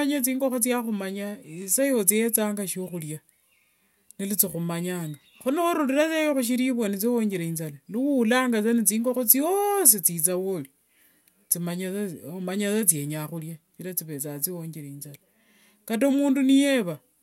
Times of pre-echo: none

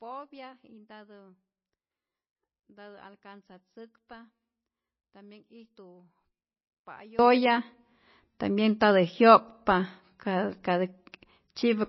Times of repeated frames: none

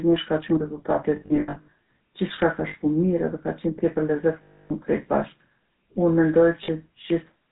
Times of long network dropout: none

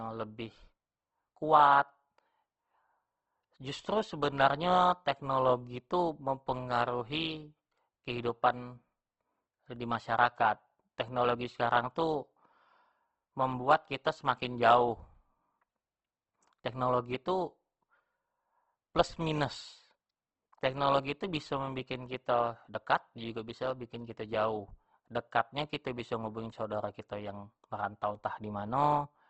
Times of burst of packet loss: none

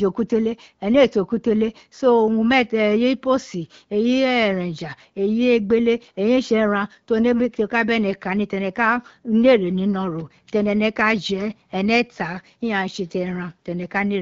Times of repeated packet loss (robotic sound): none

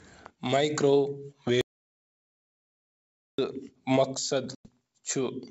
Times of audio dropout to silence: 1.61-3.38

